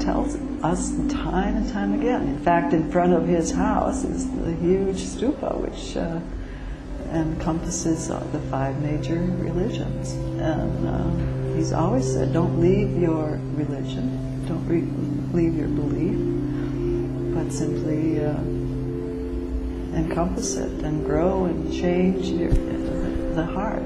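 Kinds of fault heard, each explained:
No audible faults detected.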